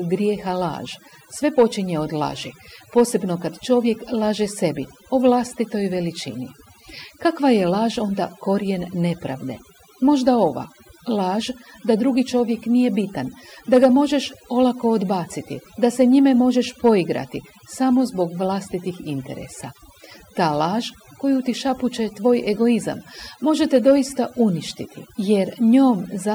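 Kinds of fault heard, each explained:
Overdone noise removal: a noise reduction stage set far too aggressively, clamping down on individual frequency bands whenever they sit close to its noise estimate, throughout the speech. Between phrases the background falls to near silence dotted with twinkling specks, and softer parts of the voice are carved away. Unlike a noise gate, which mutes everything at once, this works band by band, so the specks flicker independently rather than switching off together.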